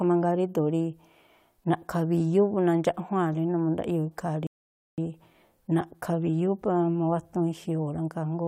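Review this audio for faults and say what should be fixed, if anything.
A rebuffering stall hits at 4.47 s. The speech drops to silence until 4.98 s, then resumes exactly where it stopped. The player's buffer ran dry, adding 0.51 s. Keep a deeper playback buffer so downloads stay ahead of playback.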